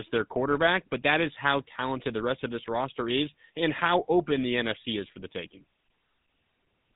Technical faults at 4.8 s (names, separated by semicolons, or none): GSM full-rate codec